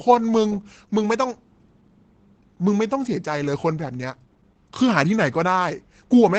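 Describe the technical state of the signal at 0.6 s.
At 0.6 s the speech carries Opus voice compression, present across the whole clip. The sound points to the SILK linear-prediction coder near 12 kbps in 20 ms frames, coding the excitation coarsely. The damage is plainly audible: muffled, hoarse, slightly robotic speech.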